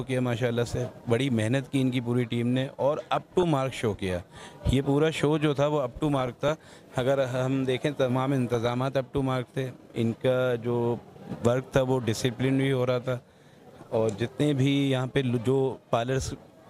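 From 3.17 to 3.43 s, the sound breaks into DAB burbling. It returns from 6.10 to 6.78 s, the longest burst, then from 8.54 to 8.74 s, 10.93 to 11.24 s and 13.09 to 13.34 s. Weak reception let bit errors through the error correction into the MP2 data. Corrupted samples put short blips of noise in single sub-bands, and corrupted scale factors make sub-bands leap in level for up to a frame.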